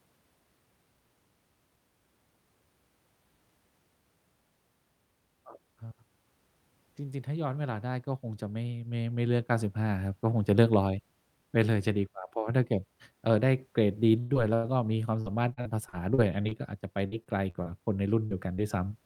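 From 14.19 to 18.66 s, repeated packet loss (robotic sound): recurring gaps up to 107 ms, each patched by stretching prior sound, so the speech turns choppy rather than showing one clean dropout.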